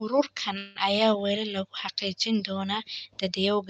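At 0.57 s the speech stalls in a call audio freeze lasting until 0.78 s. The likely cause is delayed packets draining the jitter buffer. About 180 ms of stretched, fading buzz fills the hole. The speech then resumes where it stopped, about 180 ms late, with nothing lost.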